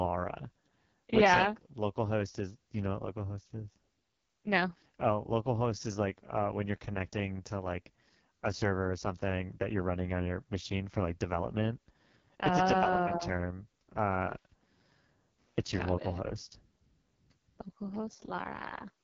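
Throughout, the speech carries heavy AMR wideband (HD Voice) codec damage. It sounds rough and raspy, pointing to the lowest 6.6 kbit/s rate. Nothing reaches above 7.2 kHz.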